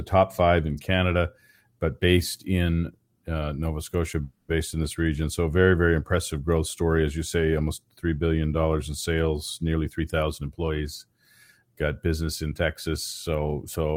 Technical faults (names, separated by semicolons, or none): call audio freeze; jitter buffer speed-up